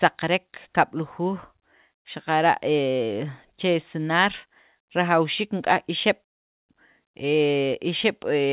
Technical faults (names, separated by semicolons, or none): none